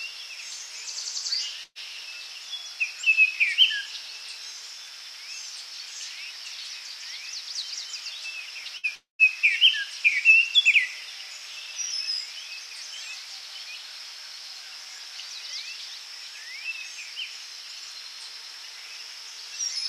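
This is a recording of everyday sounds with gaps in two spots. At 1.63 to 1.78 s there's a burst of packet loss: about 120 ms went missing, the receiver stretched the last bit of sound and faded it, and a short silence of about 20 ms follows before it picks up further along. A shorter burst hits at 8.77 to 8.86 s, roughly 60 ms lost and covered the same way. Right after, from 8.95 to 9.22 s, there's what's likely a long network dropout: about 240 ms never arrives, the held sound fades out, and about 140 ms of silence sits there before the audio returns, skipping the lost part.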